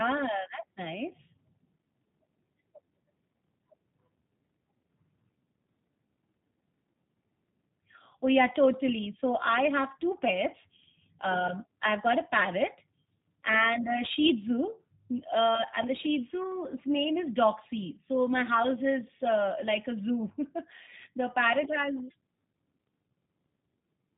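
Speech coded through G.729 runs for the whole clip, sounding slightly rough, buzzy and synthetic, which fits a low-rate 8 kbit/s VoIP codec rebuilding each frame from a filter and pitch model. A spectrogram shows nothing above 3.8 kHz, with smeared, blocky harmonics.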